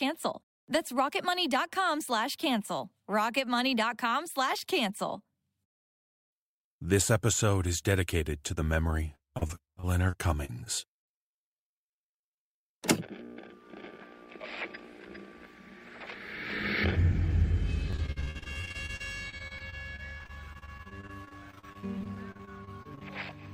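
Repeated packet loss (robotic sound) hits 9.15–11.09 s and 17.91–23.03 s. Gaps of up to 58 ms are patched with repeated sound, showing as smeared, stuttering spectrogram slices.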